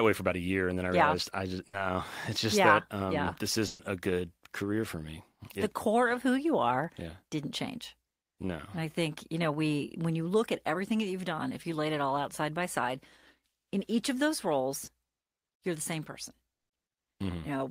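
At 1.67 to 1.75 s, after "realized yeah I just", and 3.67 to 3.81 s, after "um yeah this", a burst of packet loss leaves about 60 and 120 ms missing. The last sound is continued and turned down as each gap goes on.

At 14.85 to 14.89 s, after "in each of those", short concealed packet loss patches about 20 ms with continued audio. It is heard as a brief smear and shows as a thin blurred column on the spectrogram. At 16.57 to 16.71 s, a 120 ms burst drops to silence, a flat gap in the waveform.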